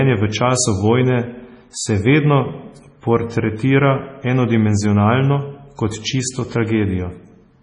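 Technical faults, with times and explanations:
Throughout, MP3 compression: the speech is band-limited with nothing above 10.5 kHz and carries heavy watery, swirling coding damage, likely from MP3 at a very low bitrate, around 24 kbps, where the encoder drops the treble and weak spectral lines flicker between frames.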